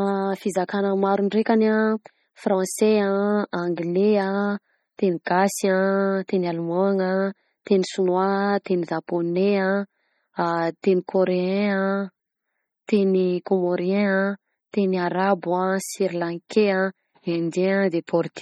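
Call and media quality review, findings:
MP3 compression, heavy, throughout: watery, swirly speech; s sounds chirp metallically; onsets smeared. Likely a low-bitrate MP3 encode, fitting roughly 32 kbps. The encoder drops weak lines frame to frame. Spectrogram: flickering holes; waveform: softened attacks.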